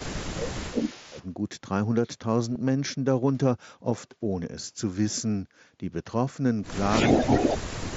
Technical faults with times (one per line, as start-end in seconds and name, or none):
0.00-0.31 echo leak
0.16-1.17 speech suppressed in double talk
0.77-1.26 echo leak
2.54 concealed Bluetooth headset packet loss
6.12 concealed Bluetooth headset packet loss
6.90-7.56 echo leak
7.18-7.96 speech suppressed in double talk